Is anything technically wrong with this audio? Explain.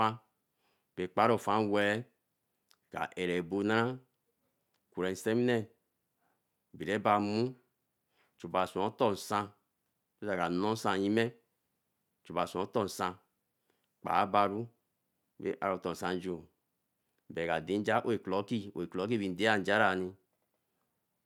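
No, no technical faults here.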